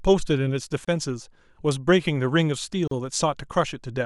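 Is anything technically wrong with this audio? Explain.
Yes. The speech has a gap at a join of encoded pieces twice: at 0.85 to 0.88 s (about 27 ms) and at 2.88 to 2.91 s (about 38 ms), two seconds apart. The audio sounds like it was encoded in two-second chunks and joined untrimmed, so encoder start-up delay and final-frame padding leave silence. The speech stops abruptly and resumes where it left off, edges smeared. Unlike a dropout, nothing is lost, and the gaps fall on a regular grid.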